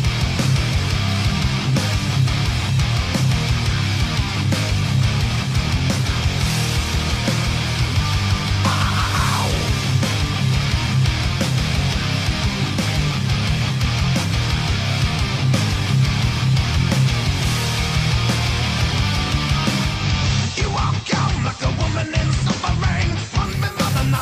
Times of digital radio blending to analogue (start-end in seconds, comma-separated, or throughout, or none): 19.85-23.64